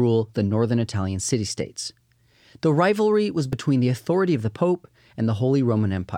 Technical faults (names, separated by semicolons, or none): dropped buffer (overrun)